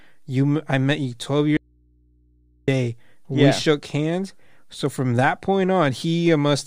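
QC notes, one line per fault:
1.57 to 2.68 s, audio dropout to a faint residue: the speech cuts off abruptly for about 1.1 s and returns just as suddenly, while mains hum stays underneath at roughly 40 dB below the speech level. The hum is what sets it apart from a pause or a mute. A natural pause would leave room tone, and a mute would go dead. Here the input stayed open with the source gone, most likely a momentary loss of the feed ahead of a live stage.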